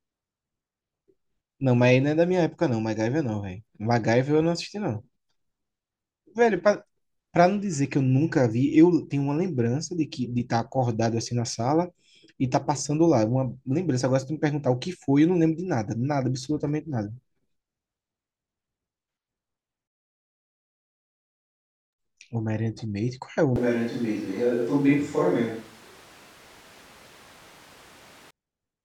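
At 23.56 s the speech suddenly turns roomy and hollow, losing its low end, with background noise rising to roughly 25 dB below the voice while the level stays about the same. That's a switch to a distant microphone, likely the close mic dropping out, and it snaps back at 28.31 s.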